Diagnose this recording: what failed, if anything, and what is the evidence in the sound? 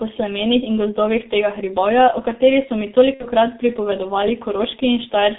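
The codec stage failed: the speech passed through the G.723.1 codec at about 6.3 kbit/s, and the damage is heavy throughout. Nothing survives outside roughly 200 Hz to 3.7 kHz, so the voice is muffled and hoarse, with smeared consonants from its slow, coarse voice model.

At the network stage, VoIP packet loss concealed by the speech codec hits from 3.14 to 3.27 s, right after "o kateri so mi". About 60 ms went missing, which fits two lost 30 ms frames. The decoder extrapolated its last pitch and filter into a fading buzzy tone or coloured noise, and the voice stays weak until it recovers.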